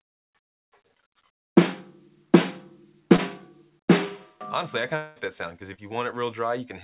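At 3.16 s there is a short concealed packet loss lasting until 3.2 s. About 20 ms of audio never arrived in time. The receiver bridged the gap by carrying on the last sound and then blending back into the real signal. It is heard as a brief smear or wobble. Anything very short in that instant may be gone.

From 4.96 s to 5.18 s the sound turns into a fading buzz or hiss for about 0.2 s. There is no true silence in this gap; the synthetic fill covers the whole hole. The audio then resumes, but the stretch that was lost never returns. The likely cause is a long network dropout. The receiver had nothing to decode, so it extended the last sound while it waited.

A second short concealed packet loss runs from 5.74 s to 5.8 s. This time about 40 ms went missing, twice the earlier loss. The patch lasts longer before real audio takes over again. All of this plays over a narrowband call sound with nothing above 4 kHz, which fits G.711 mu-law at 64 kbps.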